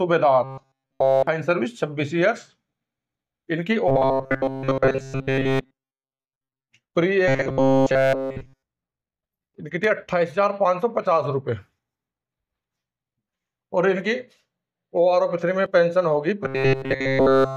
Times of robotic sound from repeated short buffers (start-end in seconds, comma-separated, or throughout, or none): 0.44-1.27, 3.88-6.68, 7.28-8.63, 16.43-17.56